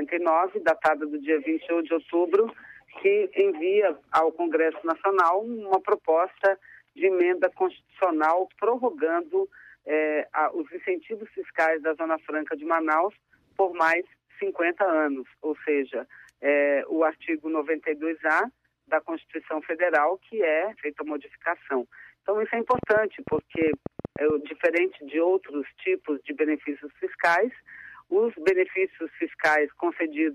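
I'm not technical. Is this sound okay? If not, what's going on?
No. From about 22.75 to 24.31 s there's a train of clicks: roughly fifteen sharp ticks, around 10 per second at an uneven pace, most likely electrical interference or a faulty connection or power supply. Unlike random crackle, each tick sounds alike.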